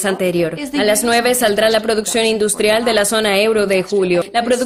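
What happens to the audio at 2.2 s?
At 2.2 s the audio is inside a run of periodic USB or driver dropouts lasting from 1.35 to 3.10 s. Every 0.125 s the driver stalls and a tiny fraction of a millisecond of audio is skipped, leaving regular ticks over the sound.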